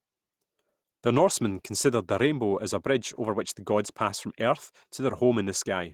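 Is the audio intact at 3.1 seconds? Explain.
No. At 3.1 s, as throughout, the speech sounds coarse and slightly hoarse and robotic from Opus voice compression, a hybrid SILK-plus-CELT coding consistent with roughly 16 kbps.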